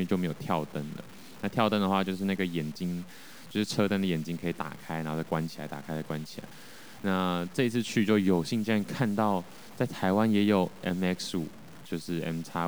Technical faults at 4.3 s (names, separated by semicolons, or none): low bit depth without dither